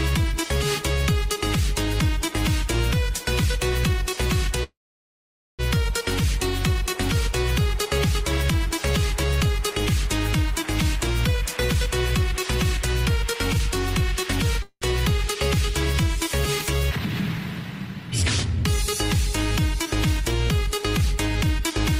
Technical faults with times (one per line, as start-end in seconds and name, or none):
4.63-5.61 call audio freeze
10.84-14.27 jitter buffer speed-up
14.62-14.84 call audio freeze
17.05-18.65 jitter buffer speed-up